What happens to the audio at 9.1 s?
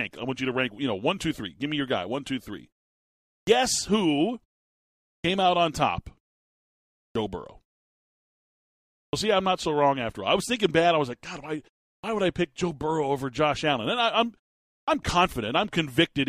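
At 9.09 s the speech comes back after a pause of about 1.5 s with its opening cut off. This is a clipped start after a pause: the output device drops into a sleep state during the silence and needs time to wake and relock, so roughly the first 40 ms, through 9.13 s, never reaches the output. The resumed speech therefore starts abruptly out of silence, missing its initial sounds.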